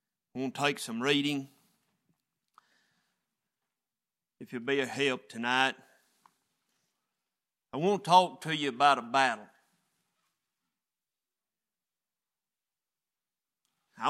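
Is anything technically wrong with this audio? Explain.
No, nothing technically wrong can be heard in this audio, and the signal stays intact and stable throughout.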